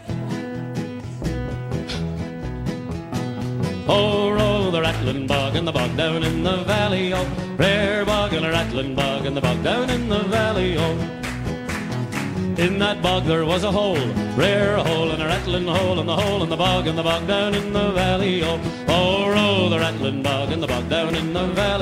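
No technical faults are audible anywhere in this recording.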